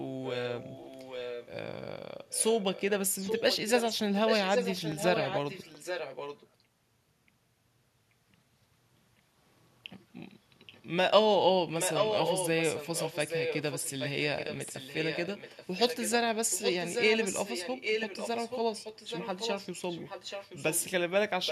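Echo leak runs through the speech at 0.24–1.49 s, 2.27–2.83 s, 3.19–6.48 s, 10.67–10.82 s, 11.78–16.12 s, 16.5–20.85 s and 21.44–21.51 s. A copy of the speech returns about 0.83 s late, sometimes faint, at around 25 dB down, but at 3.19–6.48 s and 11.78–16.12 s only about 5 dB below the original. The likely cause is a far-end loudspeaker whose echo canceller let its microphone's pickup through and sent it back.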